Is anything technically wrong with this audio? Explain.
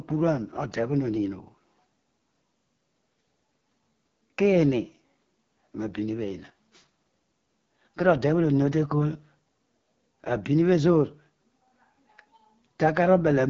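Yes. The whole speech clip has been through the AMR wideband (HD Voice) codec, and its coarse, raspy texture points to one of its lowest rates, around 8.85 kbit/s. The codec models speech from pulses through a vocal tract filter up to 6.4 kHz and fills the top with shaped noise. Nothing reaches above 7.2 kHz, and the damage is plainly audible.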